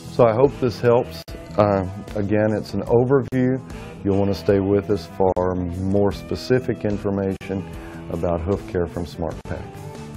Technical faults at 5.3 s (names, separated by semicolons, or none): gap at a join of encoded pieces